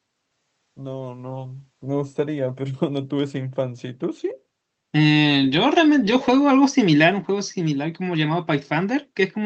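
A speech clip carried over a call path whose audio stops at about 8 kHz, and it contains a brief echo leak from 6.22 to 6.27 s: a faint copy of the speech returns about half a second after the original, roughly 20 dB below it. The cause is likely a far-end loudspeaker whose echo canceller let a scrap through. Unlike room reverberation, which trails continuously from every sound, this is a single, isolated repeat.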